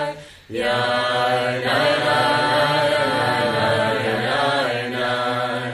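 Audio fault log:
1.67–4.25 s, doubled audio track: a full-band copy about 5 dB down trails by roughly one second, dry and abruptly starting and stopping, unlike a decaying echo; likely a second capture path.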